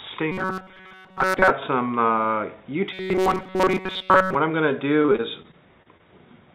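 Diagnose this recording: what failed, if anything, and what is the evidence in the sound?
A robotic sound from repeated short buffers is heard from 0.32 to 1.51 s and again from 2.93 to 4.35 s. The audio turns into a rigid, metallic buzz at 188 Hz. It only loosely follows the underlying sound. The stage is likely the driver or buffer. Input arrives too late, so the software keeps replaying its last slice of about 5.3 ms. That period sets the 188 Hz buzz. Most of each span is repeats, and the real audio in between is skipped.

Repeated packet loss, with robotic sound, runs from 5.02 to 6.01 s. This is a network fault on the call path, which carries G.711 A-law at 64 kbps. Eight gaps fall in under a second. The sound turns choppy, with pieces dropping out. About 160 ms of audio was lost, and 150 ms of it was patched by extending the preceding sound. The longest gap is 29 ms. Concealment covers about 15% of the span.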